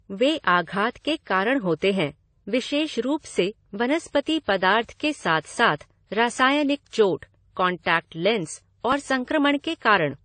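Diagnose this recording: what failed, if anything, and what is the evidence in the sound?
The failure sits at the codec stage and runs through the whole speech clip. Nothing comes through above 9 kHz, and the artefacts of different codecs are heard together. That mixture points to transcoding between lossy codecs, likely a WMA encode at around 64 kbit/s re-encoded to AAC-LC at around 32 kbit/s. The second encoder spent its scarce bits reproducing the first one's errors, added its own, and the 9 kHz ceiling remained.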